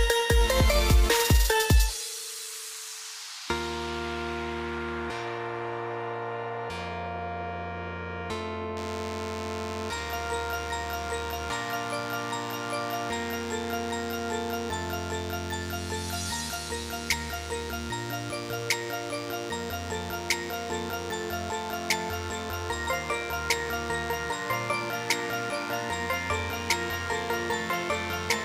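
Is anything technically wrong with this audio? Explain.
Yes, one fault. From 8.77 s to the end, DECT cordless phone buzz: radio bursts every 10 ms are rectified, giving a thin 100 Hz buzz roughly 15 dB down, seen as evenly spaced harmonic lines on a spectrogram.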